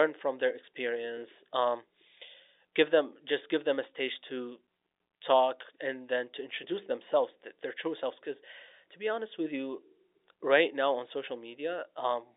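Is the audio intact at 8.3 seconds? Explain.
Yes, the speech at 8.3 s is intact, with nothing disturbing it beyond the narrow telephone band that comes from ordinary G.711 telephone coding.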